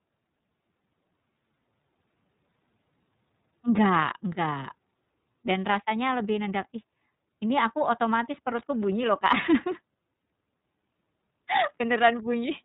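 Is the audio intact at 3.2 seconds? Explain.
No. At 3.2 seconds, as across the whole clip, the speech sounds muffled above 4 kHz and plainly rough and synthetic. This is iLBC codec damage: each frame's excitation is coded independently, and the granularity fits 30 ms frames at roughly 13 kbps.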